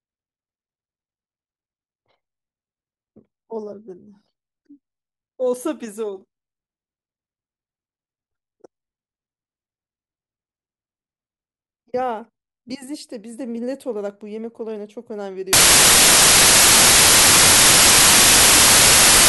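At 15.53 s the reader starts assembling each sample from the wrong bytes, misaligned or in swapped order, so the rapidly varying low bits become the dominant part of every value. From there to the end, 19.28 s, the speech gives way to loud, harsh broadband noise.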